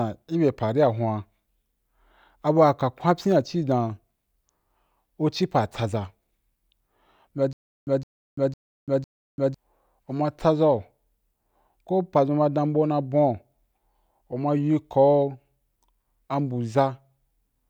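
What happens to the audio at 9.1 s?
At 9.1 s the speech is caught in a stutter with silent gaps running from 7.53 s to 9.54 s. A 163 ms burst of sound repeats four times, each followed by 340 ms of dead digital silence, so it recurs every 504 ms. The playback likely stalled and replayed its last buffered fragment on each retry. The identical repeated burst and strict even spacing set it apart from plain dropouts, which only go silent.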